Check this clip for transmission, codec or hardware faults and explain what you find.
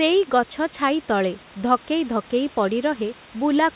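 No transmission, codec or hardware faults show up anywhere in this speech recording. Room noise sits about 22 dB below the speech, and the call path carries the audio through G.711 A-law at 64 kbps with nothing above 4 kHz.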